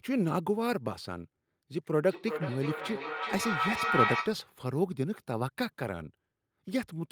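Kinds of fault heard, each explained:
Feedback howl: a closed acoustic loop between two devices sharing one room and call, where each pass from loudspeaker back into microphone adds gain, so repeats grow and narrow toward the loop's favoured frequency. From 2.05 s to 4.5 s a tone near 1.5 kHz builds to within about 1 dB of the speech level, pulsing roughly every 400 ms at the loop delay, until the loop breaks.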